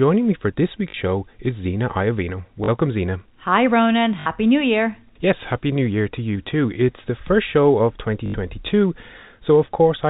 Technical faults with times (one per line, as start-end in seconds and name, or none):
0.90-0.94 packet loss with last packet repeated
2.64-2.68 packet loss with last packet repeated
4.20-4.26 packet loss with last packet repeated
8.26-8.34 packet loss with last packet repeated